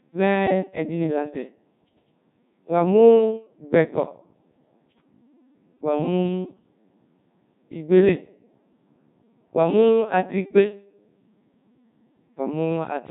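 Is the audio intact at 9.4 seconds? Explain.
No, at 9.4 seconds the speech is still running through the Codec 2 vocoder that colours the whole clip. The sound fits roughly 1.6 kbit/s: only pitch, voicing and envelope survive, and sine-wave resynthesis leaves it heavily robotic and buzzy.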